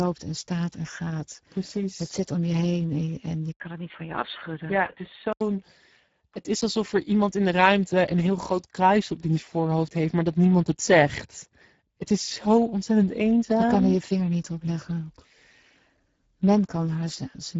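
Throughout, the speech carries Speex codec damage: a plainly audible hoarse, noisy grain where the coder lacks bits for the excitation, which points to a rate near 10 kbps. Nothing sounds above 7.7 kHz, and the top band is a thin noise-like fill.

From 3.52 to 5.41 s, just after "je heen en je", an 80 ms gap is followed by audio cut off above 3.8 kHz. It sounds dull and boxy at about the same loudness, over a new noise floor roughly 45 dB down. The likely cause is an input switched to a poorer device, which then switches back.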